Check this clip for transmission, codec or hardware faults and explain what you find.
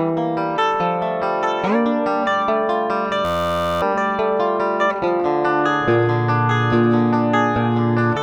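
There's one fault here, a system hang loop running from 3.25 to 3.82 s. Something upstream, the computer or its audio driver, stalled, and the sound hardware just kept replaying whatever was sitting in its ring buffer. Each loop is 11.61 ms long, which fits a 512-sample buffer, so it repeats dozens of times at 86.1 Hz. At that length it comes across as a steady, flat buzz, and about half a second of the real audio is lost underneath it.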